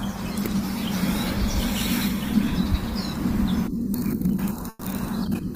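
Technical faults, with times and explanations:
4.69–4.84 s, burst of packet loss: about 120 ms of speech arrived too late or not at all, so the receiver extended the last sound and faded it out, leaving a brief fading fill, about 10 ms of silence, then speech resuming 120 ms further on.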